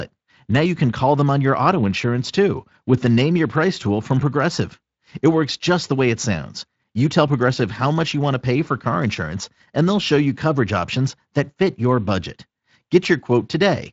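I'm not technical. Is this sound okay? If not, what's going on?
Yes, there's no fault here; the speech has been through the Speex codec, which keeps only light coding traces and stops the top end at about 7.7 kHz.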